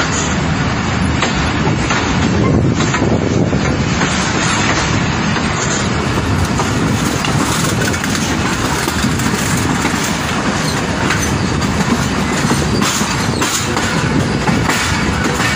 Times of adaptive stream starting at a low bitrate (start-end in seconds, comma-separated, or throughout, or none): 0.00-6.00